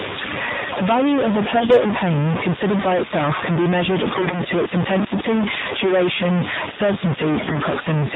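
Throughout the speech a distortion rides on every sound, and the pauses are filled with a gritty hiss instead of falling silent. This is likely a stuck bit: one data bit held fixed, knocking roughly half the samples off by that bit's weight.

Also present from start to finish, the speech is muffled and synthetic-sounding, with nothing above 4 kHz and any background turning into a swirling warble. This is the AMR narrowband mobile codec, and the plainly buzzy quality fits a low rate of about 7.4 kbps.

From 1.56 to 1.80 s, 4.06 to 4.41 s and 7.38 to 7.59 s, the speech keeps its pitch and level but briefly turns hoarse, scratchy and gargly. These are AMR bit errors. Flipped bits in weakly protected parts of the frames, at a rate of roughly 7 percent, misplaced the excitation pulses and distorted the pitch, gain and spectral values.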